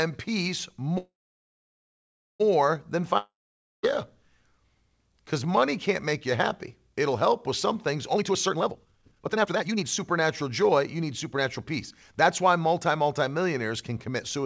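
Speech over a call link, band-limited to nothing above 8 kHz, which fits a G.722 wideband codec. From 0.98 to 2.42 s there is a call audio freeze. The last sound trails off, then about 1.3 s of silence follows. Speech resumes where it stopped, with nothing lost. Delayed packets likely starved the jitter buffer. From 3.18 to 3.85 s a long network dropout occurs. A brief fading tail gives way to silence, and about 0.66 s of speech never returns. From 8.15 to 11.74 s a jitter buffer speed-up runs the speech at 138% speed with unchanged pitch. The speech sounds hurried. Around one and a half seconds of audio is trimmed away in short pitch-period slices to cut a buffered backlog.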